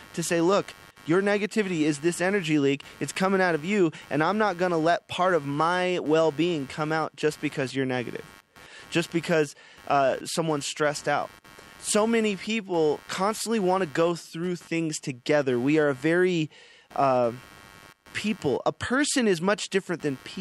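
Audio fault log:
throughout computer activity noise: shifting processor, graphics or mouse load disturbs the ground shared with the audio circuit, injecting a buzzy chirping pulse near 100 per second, about 25 dB below the speech, that rises and fades with the machine's work rather than with the talker.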